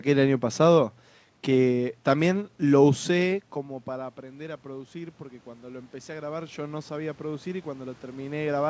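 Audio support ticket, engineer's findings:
Automatic gain rising, 3.53 s to end. Level drops about 21 dB around 3.5 s as the talker backs off the mic. Then voice and room noise swell back up together as the AGC slowly ramps its gain to compensate. Probable component: AGC, reacting slowly rather than snapping. Call path band-limited at 8 kHz, consistent with G.722 at 64 kbps.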